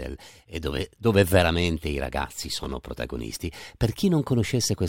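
At 2.64 to 2.66 s the speech has chunks out of order: one 10.67 ms piece lands a single chunk late, so it swaps places with its neighbour. This creates a brief jumbled moment. The waveform shows three hard joins.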